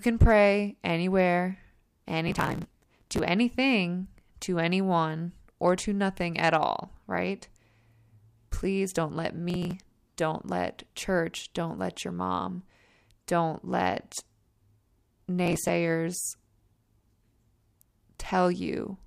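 Processor overload crackle sounds at 2.28–3.19 s, just before "anything to anyone or", at 9.50–9.73 s, between "don't let" and "don't let church don't", and at 15.46–15.69 s. Tiny buffers of roughly 5 ms miss their deadlines and are skipped, leaving hard-edged gaps heard as gritty crackle.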